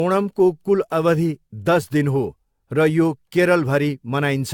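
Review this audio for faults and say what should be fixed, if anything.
Throughout the speech the sound is swirly, smeared and hollow, with blurred consonant attacks and nothing above 17 kHz, more damage than a single encode would cause. The likely cause is generation loss: around seven lossy passes, consistent with repeated AAC-LC encoding at about 96 kbit/s, each quantising on a shifted frame grid so noise and spectral holes accumulate. Prevent it by keeping a lossless master and encoding to a lossy format only once, at the final step.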